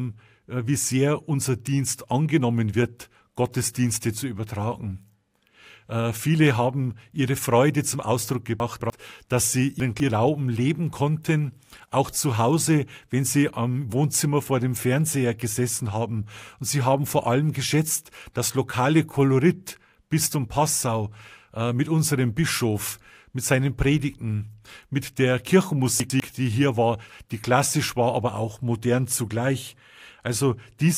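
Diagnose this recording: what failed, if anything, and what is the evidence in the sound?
Chunks out of order at 8.6 to 8.9 s, 9.8 to 10.1 s and 26.0 to 26.2 s, a buffering-stage failure in this speech recording. Each spot sounds briefly jumbled. The audio moves in 100 ms chunks, and one chunk was delivered late and slotted in after its successors: two chunks late at the first two points, one chunk late at 26.0 s. No audio is missing, only misordered.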